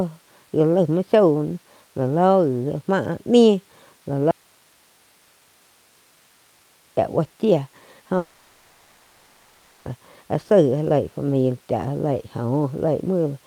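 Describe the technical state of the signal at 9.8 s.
At 9.8 s the speech is still absent, replaced by a synthetic buzzy hiss that stretches the last sound from 8.17 s and carries on, without falling to silence, until the speech returns at 9.88 s with the intervening material gone. This is a long network dropout, likely caused by a stretch of about 1.7 s in which no packets reached the receiver, whose concealment kept generating fill for the entire gap.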